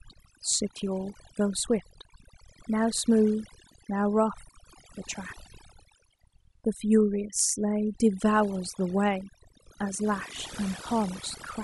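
Overdone noise removal runs throughout. Bands near the noise floor are cut away, leaving near-silent gaps with twinkling specks.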